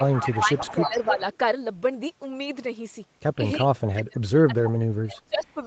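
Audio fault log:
0.00–0.37 s, 0.58–1.37 s, 3.96–4.02 s and 4.65–4.70 s, echo leak. A delayed copy of the voice comes back about 310 ms late. The early stretches sit about 10 dB below the speech. The two short later scraps are fainter, about 15 dB down. The likely cause is loudspeaker sound that got past the far end's echo canceller and was sent back.
0.00–1.24 s, 3.68–4.74 s and 5.01–5.61 s, speech suppressed in double talk. The voice dips in level while both sides talk at once. The first dip is shallow, about 10 dB. The later two drop about 30 dB, so the voice almost cuts out. The echo canceller likely mistook the talker for echo and turned it down.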